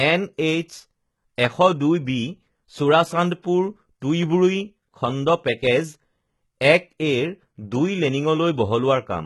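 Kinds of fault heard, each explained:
HE-AAC compression, throughout the clip: the speech sounds heavily coded, with a treble that is not genuine, which fits a very low bitrate around 16 kbps. The likely cause is spectral band replication, where only the lower spectrum is coded properly and the upper bands are synthesised by copying lower content upward under a coarse envelope. Here the s sounds come out gritty and lispy, harmonics fail to line up at the crossover, and nothing reaches above 11.8 kHz.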